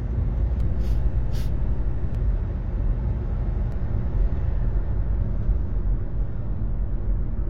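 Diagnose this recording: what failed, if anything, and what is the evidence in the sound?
A DC step at the converter or analogue input. The zero line jumps at 0.60 s and steps back at 2.15 s. It jumps again at 3.72 s and holds to the end. Each step gives a low thump or click. The sound itself carries on unchanged.

Damaged data in a compressed stream, at the codec or storage stage. A short blip sounds from 7.02 to 7.04 s. Corrupt bytes there made the decoder misread frames and lose sync. It then hunted for the next frame header, leaving a brief glitch.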